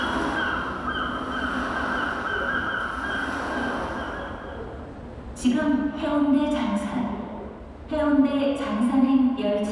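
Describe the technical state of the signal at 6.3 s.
At 6.3 s the signal is intact, with no technical fault present at that moment.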